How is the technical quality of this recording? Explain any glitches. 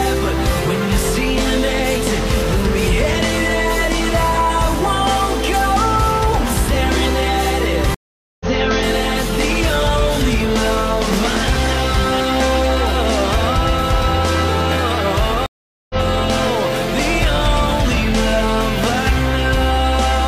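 Two dropouts break the recording, both stream reconnects. At 7.94 to 8.47 s the audio goes silent for 0.46 s, and at 15.46 to 15.96 s for 0.44 s. Each time the connection failed, the player waited, reconnected and started a new decoder mid-stream. Playback picks up further along, roughly half a second later the first time and about a fifth of a second the second time, so material is skipped and the resumed sound jumps rather than continuing. On a waveform each gap is a flat line, and the return is abrupt or briefly ramped. A spectrogram shows a blank vertical band with mismatched content on either side.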